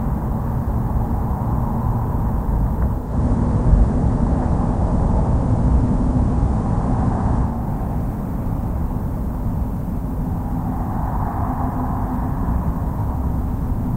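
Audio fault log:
2.93–7.68 s, digital radio blending to analogue: the receiver lost its digital stream and cross-faded over about 0.31 s to the station's FM broadcast, then back. The level shifts by about 3 dB, and hiss sits roughly 40 dB down.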